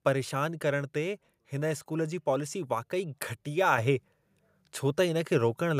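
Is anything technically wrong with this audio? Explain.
Yes. At 3.78 s the microphone volume steps up by about 6 dB, as the call software raises the input gain in one jump, so speech and background suddenly get louder together.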